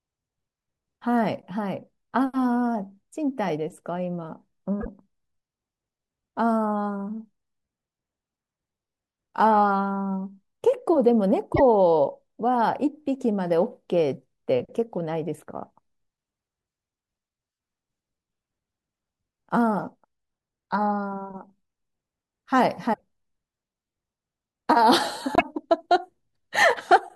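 Speech clip with four short glitches at 4.80–4.87, 11.53–11.60, 22.92–23.00 and 25.35–25.42 s, each about three 26.1 ms frames long, where the audio skips ahead and decodes garbled. This is likely a broken MP3 bit reservoir, with frames after a cut pulling the wrong bytes.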